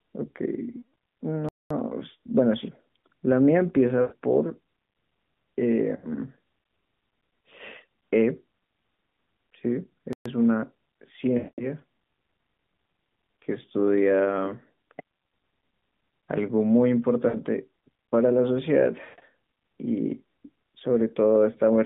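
At 0.78 to 0.84 s, radio errors corrupt a run of frames, about 160 ms in all, and the AMR decoder conceals these lost AMR speech frames by stretching the last good pitch and vocal tract settings at falling gain. The speech smears and sinks toward silence. At 1.49 to 1.71 s a playback stall, likely the player running short of data, silences the output for about 218 ms before the speech resumes. Lost frames return at 4.01 to 4.14 s (about 100 ms) and 5.95 to 6.09 s (about 80 ms), each drawn out and fading. A second stall at 10.13 to 10.26 s cuts the sound off for about 125 ms. The longest frame loss, about 200 ms at 11.38 to 11.65 s, drags out and fades fully away, with the speech coming back weak. A brief 60 ms loss follows at 17.28 to 17.37 s. At 19.04 to 19.29 s, losses scattered across about 240 ms, including a 140 ms run, give a broken, fading stutter. Throughout, the AMR narrowband codec at 12.2 kbps confines the line to about 150 Hz to 3.6 kHz, with only light buzz.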